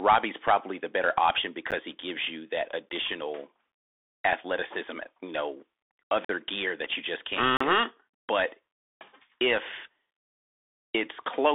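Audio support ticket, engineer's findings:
Bluetooth CVSD headset codec throughout: speech band-limited to roughly 300 Hz–3.6 kHz, nothing above 3.8 kHz, granular hiss, and scratchy sibilants from one-bit slope tracking lagging fast transients.

Blocks of digital silence at 1.71 s, 2.89 s, 6.25–6.29 s and 7.57–7.60 s: abrupt dropouts. Buffer underrun likely; 12 ms gaps fit a 512-sample buffer, the 46 ms gap 2048 samples.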